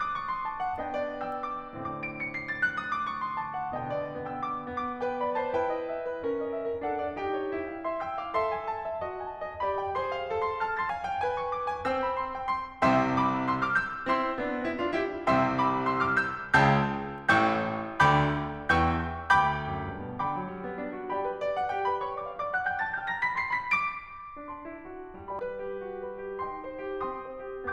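At 10.90 s and again at 25.39 s the music carries a tiny blip from damaged data in a compressed stream: corrupted bytes make the decoder misread a frame and resync. A spectrogram shows a thin vertical broadband streak; the waveform shows a brief discontinuity.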